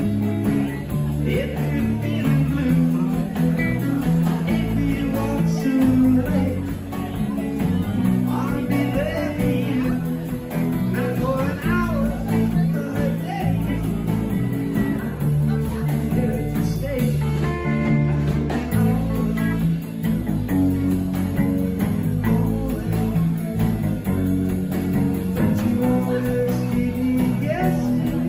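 Nothing in the audio stood out as a technical problem on listening.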